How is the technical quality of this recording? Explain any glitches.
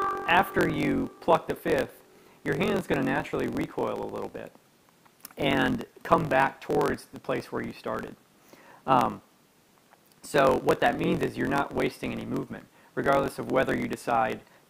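The recording is marred by one continuous fault. A block size mismatch (truncated) runs throughout: one stage hands over longer blocks than the next consumes, so each block's tail is discarded. That chopping produces a steady buzz near 45.9 Hz, fitting 1024-sample blocks, and the sound plays about 1.07 times fast with its timbre intact.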